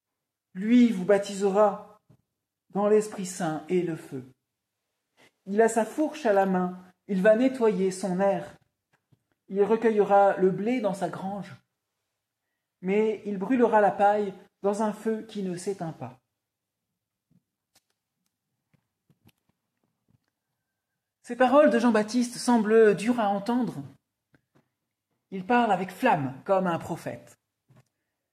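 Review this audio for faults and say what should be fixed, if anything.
No faults; nothing to fix.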